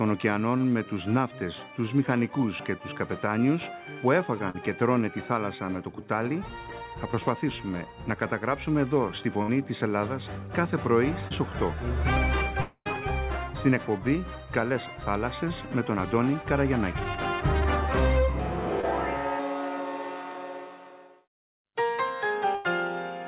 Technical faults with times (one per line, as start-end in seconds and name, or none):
4.50-4.56 short concealed packet loss
9.42-9.50 burst of packet loss
11.28-11.32 short concealed packet loss
12.60-12.87 long network dropout
18.81-18.85 short concealed packet loss
22.55-22.66 burst of packet loss